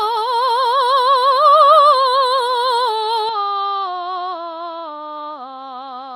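Bluetooth LC3 compression runs through the whole music clip, likely from heavy coding that fits a 32 kbps setting with 10 ms frames, leaving a grainy, breathy, noise-filled top end. From 3.29 s to the end, the input switched to a poorer device, likely one that passes nothing above 7.6 kHz. The music turns duller and a few dB quieter with no gap at the change, and a faint new background hiss sits well below it.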